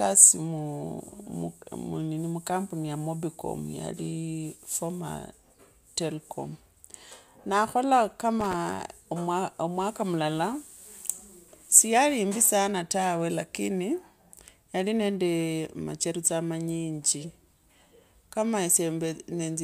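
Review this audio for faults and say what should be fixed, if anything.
A worn or dirty contact somewhere in the cable or plug run is making and breaking as it shifts, which is loose connector crackle. From 8.41 to 8.54 s, just after "na khola", the signal is chopped on and off for roughly an eighth of a second, and each reconnection jumps any standing DC on the line, so the speech is broken up by an irregular burst of crackle and scratchy pops. To prevent it, clean or replace the suspect connector and secure the cable so it cannot move during recording.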